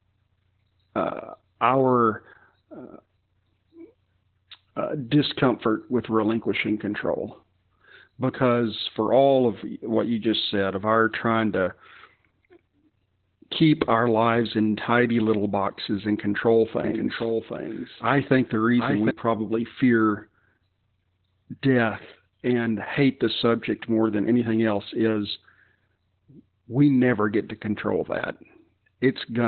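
It's a speech clip with heavy Opus voice compression all the way through: nothing survives above about 4.2 kHz, so it sounds muffled and coarse, which points to narrowband SILK coding at roughly 8 kbps, with the excitation squeezed hard.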